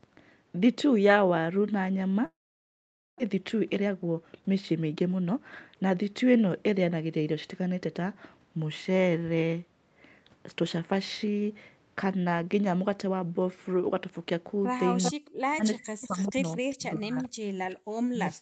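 A long network dropout runs from 2.25 to 3.22 s, likely caused by packets that stopped arriving. The receiver stretches the last speech into a fading buzz, then leaves about 850 ms of near-silence. When the speech resumes, about 600 ms of it is simply gone.

Jitter buffer speed-up follows from 3.30 to 6.08 s. The late audio arrived in a burst and piled up, so the receiver trims short pitch-period slices again and again, roughly a third of a second in total. The speech plays at 111% speed with unchanged pitch and sounds hurried.

An echo leak appears at 15.02 to 15.12 s: a copy of the speech returns 394 ms late, about 5 dB below the direct speech. The likely cause is a far-end loudspeaker whose echo canceller let part of the pickup through. A fainter return, about 25 dB down with the same 394 ms delay, recurs at 17.19 to 17.29 s.

Speech suppressed in double talk starts at 15.11 s and lasts to the end. 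It is likely the echo canceller, unable to separate near speech from loudspeaker echo while both sides talk, turning everything down. The speech dips, at its deepest by about 40 dB.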